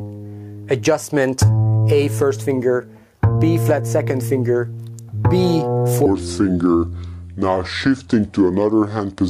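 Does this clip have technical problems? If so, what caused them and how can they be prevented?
Yes. Gain pumping runs through the whole clip: the overall level rises and falls with the loudness of the sound, swinging by around 10 dB as each loud passage drags the gain down and the gain recovers afterward. The likely cause is an input gain set far too high for the microphone, with a fast limiter or compressor reacting to every loud sound. To prevent it, lower the preamp gain and use gentler dynamics processing.

A section at the wrong speed starts at 6.06 s and continues to the end. From that point the audio plays at 0.714 times its original speed, so it becomes slower and drops in pitch by about five semitones, with tempo and pitch shifting together. The likely cause is that this part was fitted to the wrong clock by an editor or player, for example by a sample-rate mismatch between the material and the playback or project setting. 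To prevent it, match clock and sample-rate settings throughout the chain and check every joined segment at its native rate.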